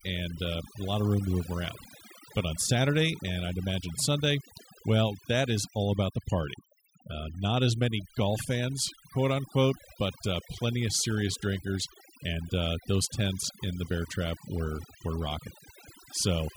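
It's a speech recording with overdone noise removal running the whole way through. The denoiser was pushed too hard, so the background drops and breaks up into little twinkling specks, and the voice loses its quieter detail, stripped away with the noise.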